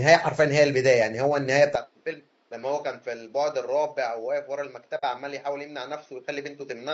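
From the start, the speech sounds rough and grainy throughout. Noise fills the gaps between harmonics, and the top band sounds thin and synthetic. The likely cause is low-delay AAC compression, AAC-ELD, at a rate that fits about 32 kbps. Its short frames resolve pitch poorly.

At 1.75 s, the sound abruptly turns duller and quieter, with no silence at the change. Nothing remains above 6.3 kHz. The level drops by roughly 10 dB, and a faint new background noise sits far below the speech. This points to an input switched to a poorer device, likely a narrower-band microphone.

From 4.97 to 5.04 s, there is AAC frame loss with muting. The decoder zeroed the missing audio, about 60 ms, which fits two lost frames. The overlapping windows fade the sound out and back in. The result is a soft-edged hole.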